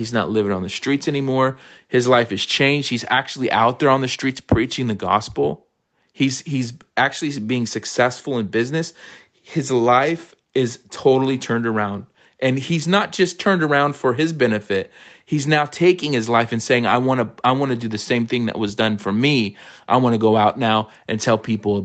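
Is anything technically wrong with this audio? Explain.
No, the speech simply shows the expected call-path character, with nothing above about 8 kHz, consistent with an Opus call link running wideband at a modest bitrate.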